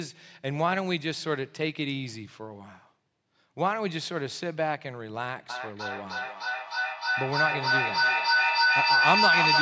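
From 5.49 s to the end, feedback echo between two devices sets in: the speech returns about every third of a second and builds to about 6 dB above the original. Room reverberation would decay smoothly, whereas these repeats come at that fixed spacing and pile up.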